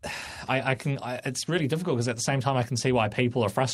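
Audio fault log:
No faults heard.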